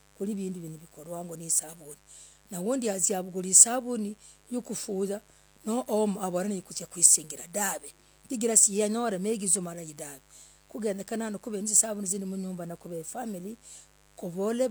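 A steady, raspy mains buzz runs beneath the speech from start to finish, around 35 dB below it. Sharp switching spikes, twice per 50 Hz cycle, leaked into the signal path, spreading harmonics of 50 Hz up into the kilohertz range.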